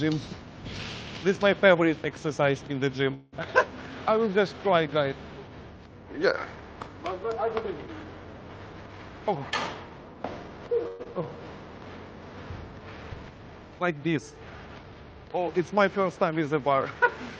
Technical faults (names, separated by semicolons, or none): call audio freeze; jitter buffer speed-up; long network dropout; jitter buffer slow-down